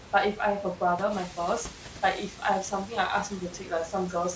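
Speech recorded over a call path whose band stops at 8 kHz, consistent with G.722, shows noise suppressor artifacts throughout. Steady room noise is pulled down by about 14 dB frame by frame, so the residue sinks in the gaps and swells under the speech. Around 1 s the room noise jumps by roughly 21 dB, and from 1.1 to 1.3 s the noise suppressor is catching up. Its noise estimate lags the jump, so the louder background passes with only about 5 dB of reduction before it settles down over about 200 ms. There is speech cut by the noise suppressor twice, where speech energy was mistaken for noise and attenuated along with it. From 2.3 to 2.42 s the level drops by up to about 12 dB, and from 3.29 to 3.71 s by up to about 8 dB across roughly 150 ms, leaving those stretches faint and swallowed.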